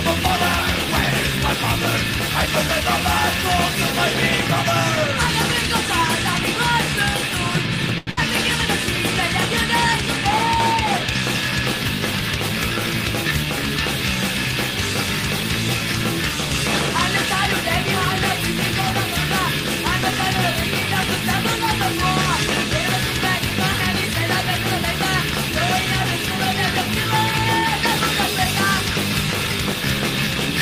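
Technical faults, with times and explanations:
7.98 to 8.09 s, short stall from a late packet: A packet arrived behind schedule and the jitter buffer ran dry, so the receiver held the last bit of sound for about 91 ms until the data turned up. Playback then resumed from exactly where it stopped, with nothing lost, but everything after it now runs about 91 ms later. The sound is simply drawn out for a moment, with a faint buzz or dip while it is held.
8.11 to 8.19 s, burst of packet loss: Right after the stall, about 80 ms of audio in a row was lost or came too late to be played. The receiver covered the gap by extending the preceding sound for roughly 59 ms and letting it fade. This gives a brief held buzz or fading hiss in place of the real sound. Playback then jumps forward past the missing 80 ms, which pulls the timing about 21 ms back toward schedule.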